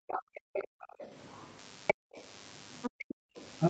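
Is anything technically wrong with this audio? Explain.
Yes, three faults are audible.

Background gated by the echo canceller, 0.00 to 0.99 s (roughly 0.7 s affected), 1.94 to 2.14 s and 2.94 to 3.37 s: the canceller clamps the microphone while the loudspeaker plays, and room tone plunges about 40 dB.

Other side's voice leaking through, 0.08 to 1.46 s, 1.87 to 2.23 s and 2.82 to 3.45 s: a second voice sits about 20 dB down, rising to about 10 dB down in the middle stretch. It is likely loudspeaker echo the canceller failed to remove, and it overlaps the gated spans rather than sounding like crosstalk.

DECT cordless phone buzz, 1.59 s to the end: a radio burst every 10 ms is rectified into a steady 100 Hz buzz, rich in harmonics, about 20 dB below the signal. Its pitch is 100 Hz, not the 50 or 60 Hz of mains hum.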